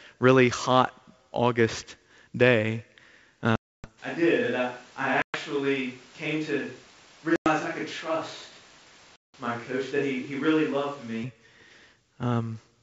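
Packet loss on an ADPCM call cuts hard silent gaps at 3.56–3.89, 5.22–5.37, 7.36–7.47 and 9.16–9.34 s. After each gap the decoder's predictor is out of step, so the speech returns with brief distortion.

From 4.0 to 11.2 s the speech turns roomy and hollow, about 10 dB quieter, with room noise about 25 dB below it. This is likely a switch to a distant microphone.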